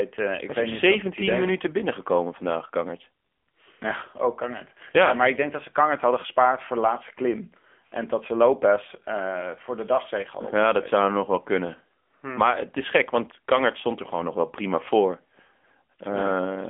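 From start to finish the speech carries AMR narrowband mobile codec damage, and it is plainly audible. The signal has been squeezed into an 8 kHz telephone channel, so the band runs only from about 250 Hz to 3.5 kHz, with nothing at all above 3.7 kHz. The strong buzzy, synthetic edge points to a low AMR-NB mode near 8 kbps. On a spectrogram the energy stops at a hard flat ceiling, with little below 250 Hz.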